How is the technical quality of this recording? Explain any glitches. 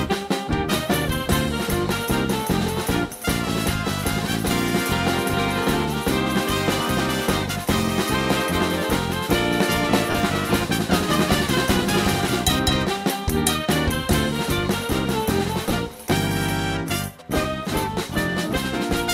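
Two short dropouts stand out, each heard through the light lossy compression that runs through the whole clip. At 10.11 to 10.15 s, and again at 15.69 to 15.71 s, the sound turns into a brief noisy smear. These are lost LE Audio frames. The LC3 decoder patched each gap by repeating the last spectrum with randomised signs. The first gap is about 37.5 ms, which fits five 7.5 ms frames, and the second is about 15 ms, or two frames.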